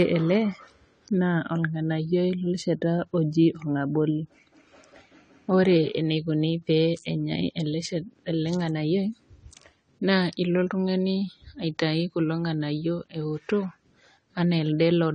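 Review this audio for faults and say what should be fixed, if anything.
Throughout the speech, nothing sounds above 9 kHz, so the sound is dull and muffled. Sibilants fizz. Sustained sounds warble and smear. The likely cause is AAC compression, AAC-LC at a low bitrate, around 32 kbps. Too few bits force the encoder to cut the top band and leave holes in the spectrum. Encode at a higher bitrate, or keep an uncompressed master for editing.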